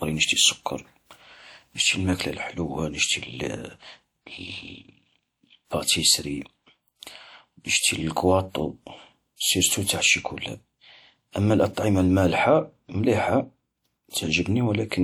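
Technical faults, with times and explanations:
14.10 to 14.13 s, pre-echo: a short hiss runs for about 38 ms ahead of a sharp attack near the end of the speech. The codec spread its quantisation noise across the whole transform block, so noise sized for the loud onset leaked into the quiet moment before it, softening that attack.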